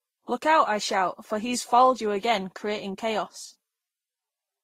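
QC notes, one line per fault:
Throughout: transcoding between lossy codecs, nothing above 15.9 kHz and two kinds of compression smear stacked together, likely Vorbis re-encoded to Opus at low bitrates.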